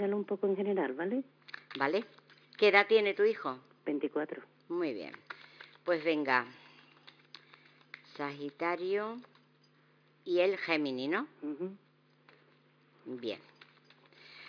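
Nothing is technically wrong with this audio.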